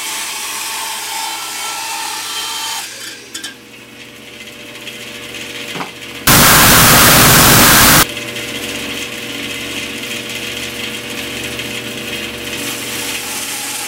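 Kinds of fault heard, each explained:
Wrong sample width: from 6.27 to 8.03 s, bytes are misread, fitting 16-bit data read as 8-bit. Loud noise buries the sound at half speed.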